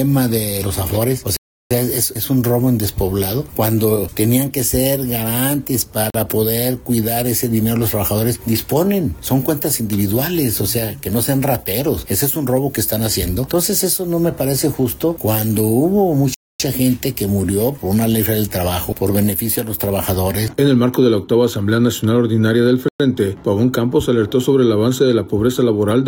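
The audio drops out four times, each a block of digital silence: 1.37 to 1.71 s (about 341 ms, which fits a 16384-sample buffer left unfilled), 6.10 to 6.14 s (43 ms), 16.34 to 16.60 s (256 ms) and 22.88 to 23.00 s (113 ms). Each cut is abrupt. On the waveform these are flat, near-silent stretches. On a spectrogram they are empty vertical bands.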